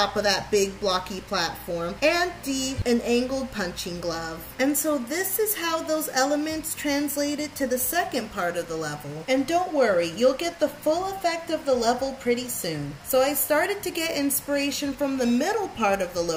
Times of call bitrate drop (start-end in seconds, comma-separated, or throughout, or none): none